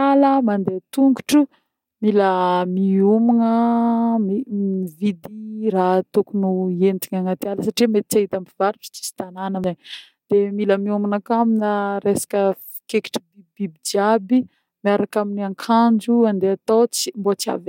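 At 4.74 s and again at 9.64 s the speech jumps forward, with roughly a tenth of a second gone each time and the two sides butted together without any gap. That's the classic audio missing between chunks pattern: the spacing fits a recorder working in 5-second blocks, which likely drops a short slice each time it closes one block and starts the next.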